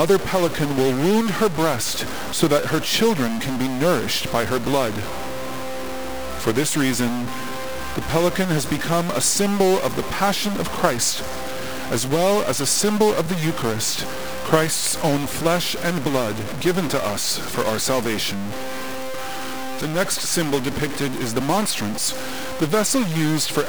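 Through the whole clip there's harsh, buzzy distortion, and even the quiet gaps fill with noise. That's likely a stuck bit, with steps of about -25 dBFS.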